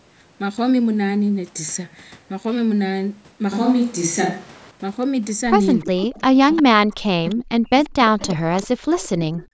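A speech recording with two intertwined call faults in its second half. From 5.8 to 6.62 s and again from 7.27 to 9.43 s, a faint repeat of the voice trails it by 347 ms, about 15 dB below the speech at first and about 20 dB below later. This is an echo leak, likely from a loudspeaker on the far end whose echo canceller let part of its microphone pickup return. It differs from room reverberation because it is a distinct, late, discrete copy rather than a smooth decay. Overlapping this, from 5.81 to 9.45 s, the main voice dips for a total of about two seconds, falling by as much as around 40 dB. That is speech suppressed in double talk, likely the canceller attenuating everything while both sides spoke at once. It differs from a network dropout because the gaps come when both sides talk at once instead of falling at random. The band limit at 8 kHz from the call's microphone processing is expected.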